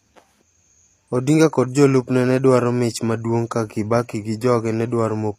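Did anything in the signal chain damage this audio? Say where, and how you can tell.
Yes, at the codec, throughout. Nothing lies above 14.9 kHz. The treble sounds copied upward and gritty, likely HE-AAC compression at a low bitrate near 24 kbps.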